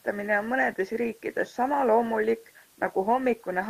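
Nothing in this speech recording stood out as a technical problem on listening.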